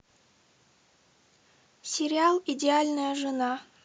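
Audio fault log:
No faults were detected in this speech recording.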